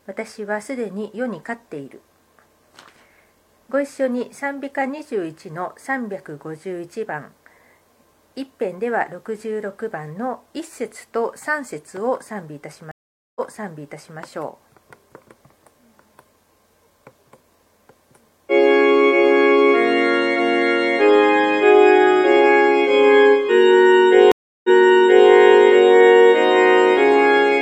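Stream reconnects at 12.91 s and 24.32 s: the connection dropped, leaving 0.44 s and 0.33 s of silence, then a fresh decoder resumed 0.84 s and 0.65 s earlier, repeating audio.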